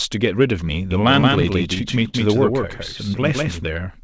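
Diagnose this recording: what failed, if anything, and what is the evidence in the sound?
A doubled audio track runs from 0.91 to 3.65 s. A second full-band copy trails the speech by roughly 150 ms at about 5 dB lower, with no room decay and an abrupt start and stop. This likely comes from a second, slower capture or routing path mixing the same signal back in.

Repeated stalls (stutter) occur from 1.02 to 2.15 s. They are short drags, the longest 44 ms and about 153 ms in total, where the last sound is held and continued and nothing is lost. Network packets arrived late, so the jitter buffer kept running dry and the call path bridged each gap. Throughout, the audio stops at 8 kHz, which fits a wideband call codec.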